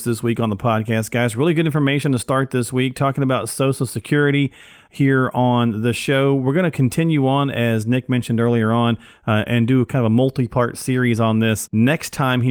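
Nothing goes wrong anywhere in this speech recording, so there's no fault to point to at any moment.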